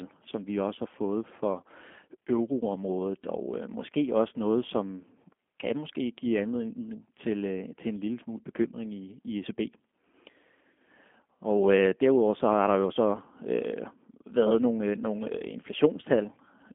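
G.729 codec coding runs throughout this speech clip, from start to finish. The sound is squeezed into a telephone band of roughly 200 Hz to 3.4 kHz with nothing above 3.6 kHz, and the voice carries a plainly audible rough, synthetic edge. That texture comes from rebuilding each 10 ms frame out of a vocal tract filter, a pitch predictor and a handful of pulses, which fits a low-rate 8 kbit/s G.729A stream.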